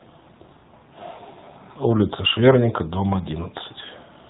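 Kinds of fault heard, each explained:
AMR narrowband mobile codec: speech squeezed through a low-rate vocal-tract model, sounding plainly buzzy and synthetic, consistent with a mode near 7.4 kbps; a spectrogram shows nothing above 4 kHz.
Lost AMR speech frames: at 1.16 to 1.20 s a brief warbling dip, fitting one concealed 20 ms frame; the waveform shows a short sag in level before the sound resumes roughly.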